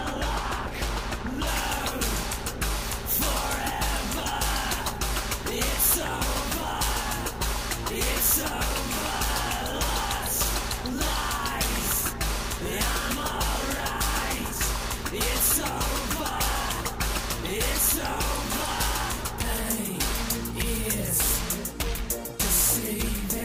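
Pre-emphasis left on from 1.47 s to the end: treble boosted for transmission was never cut back, lifting 10 kHz about 10 dB, consistent with a 50 µs FM curve, so the sound turns thin, bright and sibilant.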